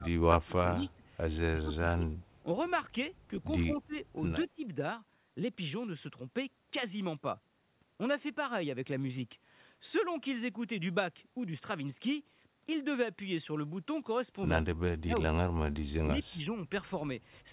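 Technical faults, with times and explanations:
0.0–0.07, 0.33–0.56, 0.76–1.03, 1.48–2.13, 3.72–3.96, 4.39–4.65, 14.95–15.55 and 16.13–16.57 s: speech suppressed in double talk. The speech dips or partly cuts out, by about 10 to 35 dB at the deepest points. This is likely an echo canceller that could not tell the talker from the far-end echo and turned both down.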